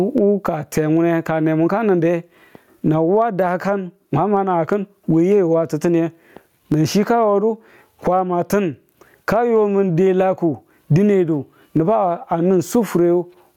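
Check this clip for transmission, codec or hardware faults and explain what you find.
There's one fault here, and it runs through the whole clip: gain pumping. The input gain was likely set far too high, so a fast limiter clamps down on every loud syllable by around 20 dB. Loud and soft parts sit closer in level, leaving everything squashed.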